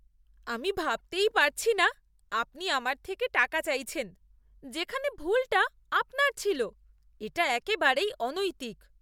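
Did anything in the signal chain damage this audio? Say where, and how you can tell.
No, nothing stood out on listening that would point to damage anywhere in the signal chain for this speech recording.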